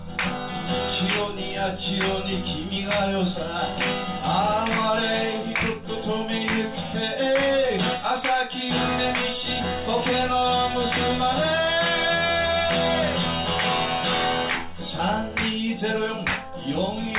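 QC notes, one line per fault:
No faults found on this clip.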